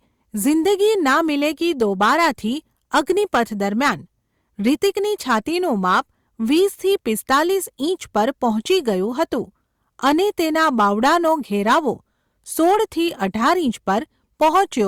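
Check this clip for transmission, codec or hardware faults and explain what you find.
Hard clipping runs through the whole speech recording. Its loudest peaks are driven about 8 dB past what some stage in the chain could pass, so they are sheared off flat at the ceiling, affecting only a small share of samples, around 2 percent. On the waveform those peaks appear as squared plateaus; on a spectrogram each one throws vertical smears of harmonics high up the spectrum. By ear this gives a crackly, gritty edge to loud syllables.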